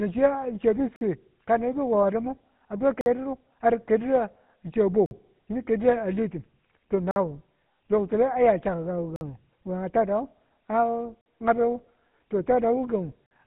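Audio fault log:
throughout: GSM full-rate codec. The speech has been squeezed to about 13 kbps by modelling the vocal tract and exciting it with a thinned, regularly spaced pulse train. The result is a plainly audible buzzy, gravelly roughness, with nothing passing above 3.8 kHz, so sibilants and brightness are dulled.
0.96 to 13.31 s: gap between chunks. Seven 50 ms silences fall at 0.96, 3.01, 5.06, 7.11, 9.16, 11.21 and 13.26 s, the first right after "chiya chiya be". The audio arrives in 2 s chunks with silence inserted at each join, so the sound keeps going but is cut by short holes every 2.05 s.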